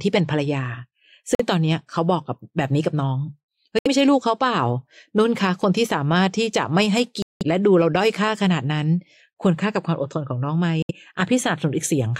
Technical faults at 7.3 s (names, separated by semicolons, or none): Bluetooth dropout